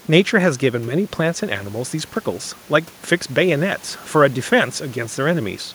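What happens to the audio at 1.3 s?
Nothing goes wrong at 1.3 s: the speech carries on intact there, with no dropout, click or distortion at that moment.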